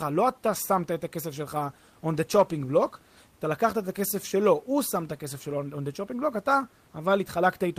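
Speech, with no technical faults to be heard.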